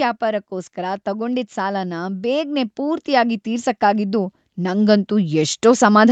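Speech carrying automatic gain rising: from 0.2 s to 6.08 s the level climbs steadily by about 13 dB, as a call's gain control judges the input too quiet and keeps turning it up. Voice and background noise swell together, which sets it apart from a talker moving closer to the microphone, where only the voice would grow. The creep lasts nearly six seconds rather than snapping up like a switched level. Nothing is heard above 8 kHz, consistent with an Opus call path.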